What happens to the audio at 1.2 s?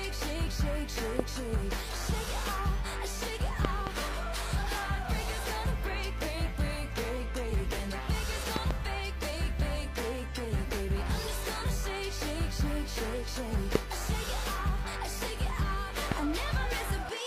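At 1.19 to 1.22 s a single loud pop sits on top of the audio, rising far above it, somewhere around 20 dB. It is likely a voltage step or pulse from a plug, switch, static or driver glitch, shaped by the following circuitry into a short thump. Unlike a dropout, the underlying sound never stops; it carries straight through beneath the pop, and there is just one burst, not a pair or a train of clicks.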